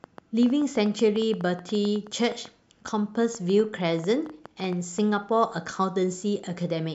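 From 0.04 to 5.0 s, a train of clicks: about forty unevenly spaced pops at 6.9 per second, peaking about 5 dB above the speech, likely from interference.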